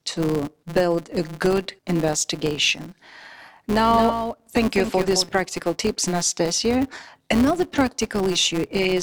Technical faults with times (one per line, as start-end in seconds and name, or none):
0.00-9.03 filter restarted on every block
3.89-5.29 doubled audio track